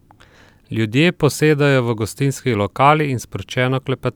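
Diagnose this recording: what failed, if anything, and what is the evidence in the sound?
Nothing failed here: the speech comes through with no audible fault at any stage, so there's nothing to trace back.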